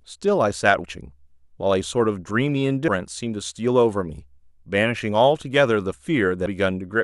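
Compressed frames skipped at 0.84, 2.88 and 6.46 s in this speech: roughly 150 to 200 ms of audio is missing at each point, consistent with several dropped 26.1 ms codec frames, leaving brief smeared blips where overlapping frames join.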